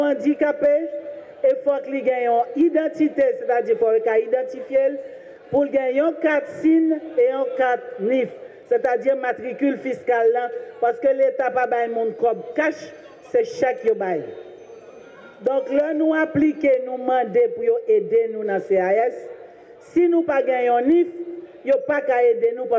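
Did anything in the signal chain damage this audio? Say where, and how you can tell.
Yes. Gain pumping runs through the whole clip: the level ducks by about 10 dB under each loud sound. The likely cause is input gain set far too high, forcing a fast limiter to clamp down repeatedly. Unlike a noise gate, the floor rises rather than cutting out.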